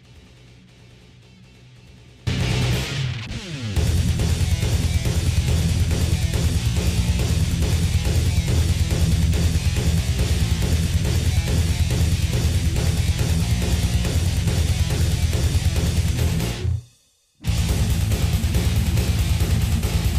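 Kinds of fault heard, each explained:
Audio dropout to a faint residue: The likely cause is that the wanted signal was lost somewhere upstream while the rest of the path stayed live. Here the gap is already under way when the clip opens, so the first 2.27 s carry only a faint trace of the sound, around 25 dB below its normal level. At 2.27 s the full signal returns abruptly, a hard switch rather than a fade or a natural pause.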